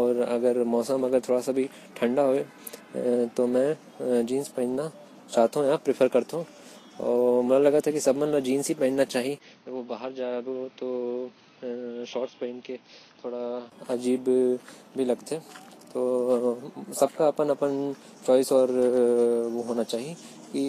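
From start to end the speech carries plainly audible Vorbis compression damage, likely from a low bitrate around 34 kbps: treble above 14.2 kHz is gone, hiss and grain replace fine detail, and attacks blur. A spectrogram shows a flat ceiling at 14.2 kHz and speckled upper bands.

From 9.38 to 13.72 s the sound turns dull and drops about 10 dB, likely because the input switched to a poorer device. A 20 ms gap marks the switch, nothing passes above 6.3 kHz, and new noise sits about 30 dB down, visible as a lowered spectrogram ceiling and smaller waveform.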